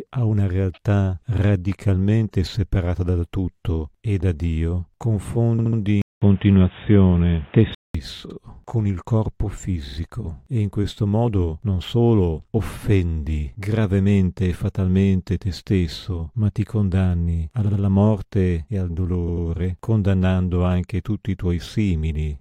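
At 5.58 s the speech stutters. A short block of about 70 ms plays three extra times, adding 0.21 s. These are repeated frames. A run of compressed frames was passed on more than once, so the decoder replays the same slice.

From 6.02 s to 7.95 s the sound turns dull and boxy. Nothing is left above 3.8 kHz. A gap of 0.2 s of silence marks the change. The level shifts by roughly 5 dB. A new noise floor sits far below the speech, around 35 dB down. This is likely an input switched to a poorer device, with a narrower band and its own tone and hiss.

Repeated frames return at 8.29 s, just before "con il corpo". A 70 ms block plays once more. At 9.87 s a 46 ms block plays twice more. At 17.65 s, after "stesso ma ti condanni" and before "morte e al", a 70 ms block repeats twice. At 19.27 s, after "morte e al" and before "condannando anche tutti i", a 93 ms block repeats twice. Each one is a brief stutter.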